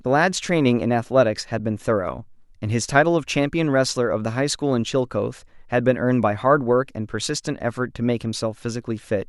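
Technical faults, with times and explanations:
1.59 s, AAC frame loss with muting: one 10 ms frame, likely low-delay AAC, is zeroed; overlapping windows fade out and in, leaving a brief, soft dip.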